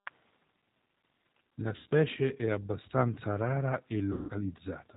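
G.729 codec coloring runs through the whole clip. The speech sounds band-limited and slightly rough and synthetic, which fits an 8 kbit/s G.729A coder. That codec rebuilds each 10 ms frame from a vocal tract filter, a pitch predictor and a handful of pulses, and passes nothing above 4 kHz. Here the damage is plainly audible: the speech is dull at the top and has a grainy, artificial edge.

VoIP packet loss concealed by the speech codec occurs at 1.76 to 1.87 s, just before "è abbastanza rara". The decoder covers the gap of about 100 ms by repeating its last pitch and filter at falling gain. The sound there is stretched out and fades. Because each frame builds on the previous one, the speech stays weak for a moment after the gap.

The same concealment recurs from 4.13 to 4.31 s, after "è abbastanza rara". It covers about 160 ms, so the stretched, artificial sound lasts longer and fades further before normal decoding resumes.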